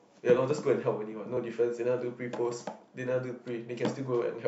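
At 1.37 s the speech has a repeated buffer: new audio arrived late, so the device replayed its last block, about 1.45 ms long, which fits a 64-sample buffer. That tiny piece plays once more with hard joins, giving a brief click rather than a stutter, and unlike a dropout, essentially nothing goes missing.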